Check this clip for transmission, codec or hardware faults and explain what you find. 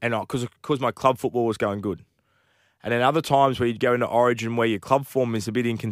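No faults can be heard.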